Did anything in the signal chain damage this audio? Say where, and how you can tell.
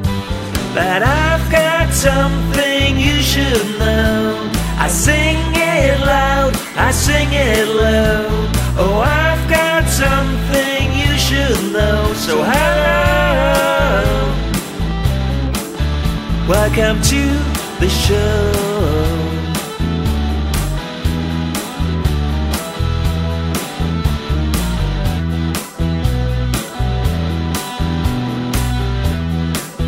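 Yes. From 13.42 to 17.95 s a train of clicks, around thirty irregularly spaced pulses at about 7.3 per second and roughly as loud as the programme, ticks over the sound, likely from interference in the analogue wiring. Expect thin vertical broadband lines on a spectrogram and sharp spikes in the waveform.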